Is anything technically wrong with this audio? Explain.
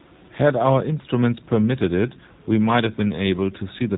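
Yes, the whole clip has gone through a G.729 codec, and the damage is plainly audible from start to finish. G.729A rebuilds speech from a vocal tract filter and a pitch predictor, plus a handful of pulses per 10 ms frame, so it models speech rather than preserving the waveform. The sound is cut off above 4 kHz, making it muffled and phone-like, with a rough, slightly synthetic buzz that fits an 8 kbit/s G.729A encode.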